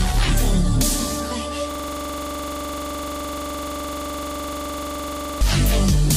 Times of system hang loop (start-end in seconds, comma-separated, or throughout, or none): 1.71-5.41